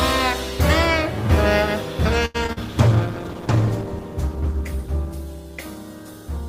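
From 2.25 to 2.58 s there is repeated packet loss, heard as robotic, choppy sound. Four short holes, the longest about 90 ms, are patched by stretching the previous sound, which accounts for roughly 150 ms, while about 80 ms is simply missing. The result is choppy sound with pieces missing.

Beginning at 2.66 s and lasting until 6.33 s, a call bitrate drop follows. The coarser, rougher texture and dulled top end point to the encoder falling from about 32 kbps to 13 kbps after the bandwidth estimate collapsed, with the worst, most muffled stretch lasting about 1.1 s.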